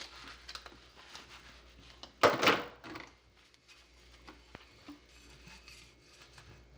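From the start to the end of the sound, a buzz at 50 Hz sits under everything. This is a filter restarted on every block. The filter drops its memory at each block boundary and begins again from silence. Each restart leaves a tiny transient. Fifty of these per second fits blocks of about 20 ms. The ticks merge into a steady buzz. It grows louder when the sound is louder and fades in quiet moments.

From 4.55 to 4.57 s there is a single loud pop. It stands roughly 15 dB above the surrounding sound. It is a sharp, short crack, and the audio carries on beneath it without a break. The likely cause is a sudden voltage step or pulse entering the signal path, such as a switch, a plug or static. The following circuitry shapes that pulse into the brief thump.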